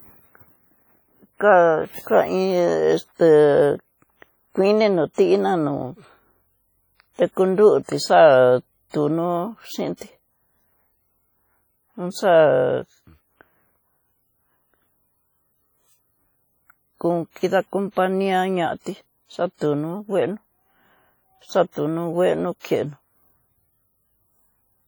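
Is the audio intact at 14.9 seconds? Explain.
No. At 14.9 seconds, as throughout the speech, there is a ringing, washy smear with hiss that breathes along with the signal and weak detail dropped out. This is likely heavy WMA compression: long transform blocks spread quantisation noise over tens of milliseconds, fitting a low bitrate around 32 kbps.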